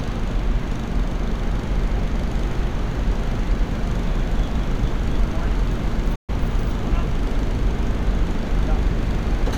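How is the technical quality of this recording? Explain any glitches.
There is one glitch: at 6.15 to 6.30 s the sound fades out within about 8 ms and falls silent, a digital broadcast dropout. The receiver muted on bad frames, losing roughly 128 ms, which fits about four frames.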